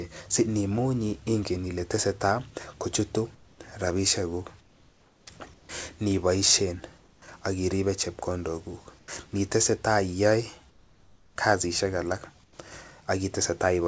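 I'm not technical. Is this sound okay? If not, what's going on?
No. In the pauses between speech, the real room background is swapped for comfort noise: a plain, even hiss, slightly quieter in most of them. This happens at 3.35–3.59, 4.61–5.27, 5.54–5.69, 6.98–7.22, 8.99–9.08, 10.70–11.36 and 12.44–12.59 s. The likely cause is the call pausing transmission when no one talks, with the receiving end filling the gap with artificial hiss. Unlike a dropout, the gaps never go fully silent.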